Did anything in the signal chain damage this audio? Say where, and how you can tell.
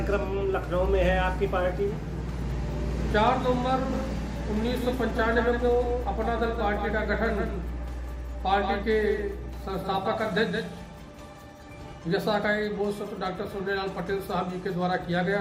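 Yes: a doubled audio track from 3.93 to 11.93 s, an abrupt, dry copy about 150 ms late and roughly 5 dB quieter, likely from a second, slower capture path.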